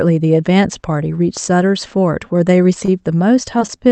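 At 2.85 to 2.92 s, one sound is held a little too long, with a slight buzz or dip where it hangs. This is a short stall from a late packet. The next packet arrived late and the jitter buffer ran dry, so the receiver stretched the last sound for about 25 ms until the audio caught up, then resumed where it left off. The playout delay grew by 25 ms, and about 5 ms was later trimmed.

Near the end come two quick smears, at 3.59 to 3.63 s and again at 3.67 to 3.71 s. Each is a short concealed packet loss. About 20 ms of audio never reached the decoder in time, and the receiver papered over the gap by extending the preceding sound for 13 ms and then 19 ms before blending back in. A brief sound can be blurred or lost in each spot. The audio also shows an upper limit around 8 kHz from the call codec.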